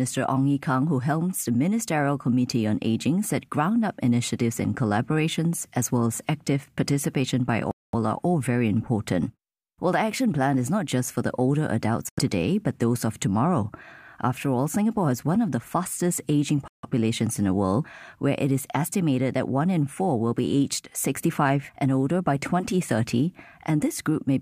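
The speech cuts out three times. At 7.71 s it drops to silence for about 220 ms. At 12.09 s there is a gap of about 85 ms. At 16.68 s it goes silent again for about 150 ms. These are likely Bluetooth stalls. Interference delays the packets, the headphones' buffer empties, and playback halts until the resent data arrives.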